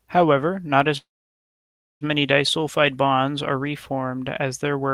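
A call audio freeze runs from 0.97 to 2.04 s, right after "not as". The last sound trails off into about 0.96 s of silence, likely because delayed packets emptied the jitter buffer. The speech then resumes where it stopped, nothing lost, just running about 1.04 s late.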